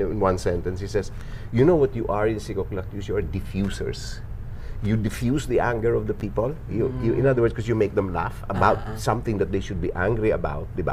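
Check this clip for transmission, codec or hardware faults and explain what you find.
There's one fault, a case of chunks out of order at about 6.19 to 6.21 s. A 10 ms piece of audio turned up one chunk late and got played after the piece that should have followed it, so the two swap places. Nothing actually goes missing, but the swap leaves three hard joins where the waveform doesn't line up. You hear it as a tiny jumbled blip.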